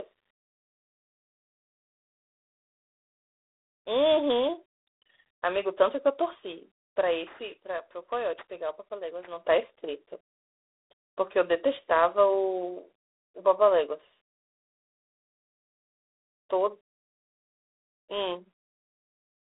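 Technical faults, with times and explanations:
Throughout, G.726 ADPCM: a harsh, rasping hiss tracks the speech level, with no sound above 3.8 kHz, from coarse few-bit difference coding consistent with 24 kbit/s.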